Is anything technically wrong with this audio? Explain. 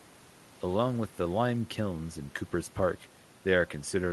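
No, nothing technically wrong can be heard here.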